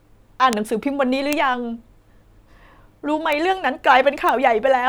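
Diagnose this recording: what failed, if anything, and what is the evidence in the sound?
A digital transfer or storage stage corrupted individual bits, producing bit error spikes in this speech recording. Four sharp ticks occur at 0.53, 1.33, 3.33 and 4.29 s. The first two peak at about -1 dBFS, and the later two at about -7 dBFS. Each lasts only a sample or a few. A flipped high-order bit throws a sample value far from its neighbours, and it snaps straight back. That produces a broadband click that has nothing to do with the speech.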